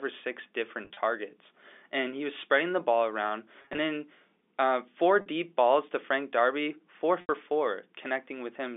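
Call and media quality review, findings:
Packet loss with pitch repetition at the receiver's concealment stage, four bursts of lost packets that fit 10 ms frames:

0.85–0.97 s, after "or six": 70 ms lost over 120 ms, runs of up to 30 ms. Last pitch period repeated, giving a brief held buzz.

3.62–3.78 s, between "spreading the ball around" and "then uh four": 100 ms lost over 160 ms. Repeated pitch cycles produce a slightly held, buzzy sound.

5.21–5.26 s, between "then uh four" and "balls to": a 50 ms continuous gap, bridged by a short held, buzzy tone.

7.21–7.29 s: 80 ms lost. A held buzz fades, then sound returns with a cross-fade.

All four sit within the 300 Hz–3.6 kHz G.711 telephone band.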